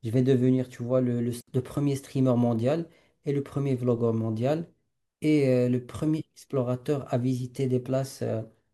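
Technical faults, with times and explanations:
1.41–1.47 s, digital wireless dropout: the receiver lost too much data and muted for about 66 ms, leaving a clean gap of near silence with no noise burst either side. The waveform shows a flat hole, and the spectrogram a sharp vertical blank band.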